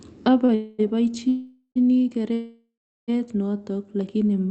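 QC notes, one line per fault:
0.45–0.51 s, short stall from a late packet: the sound is held for about 32 ms, a brief stretched sustain with a faint buzz, then resumes exactly where it left off. A packet arrived late, the jitter buffer briefly ran dry, and nothing is lost.
0.55–0.81 s, 1.29–1.78 s, 2.34–3.10 s, call audio freeze: the receiver fills 240 ms, 471 ms and 741 ms with a buzzy continuation of the last sound that fades. The second ends in about 90 ms of silence, the third in about 390 ms before "notok lakini mayani". The likely cause is packets held up in transit, draining the jitter buffer. Playback then resumes in place, so the gaps add delay without dropping audio.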